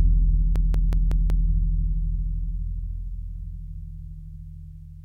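A system hang loop runs from 0.56 to 1.49 s: the music stalls while the hardware replays one 186 ms buffer, fitting 8192 samples, five times, giving a machine-gun stutter at 5.4 Hz.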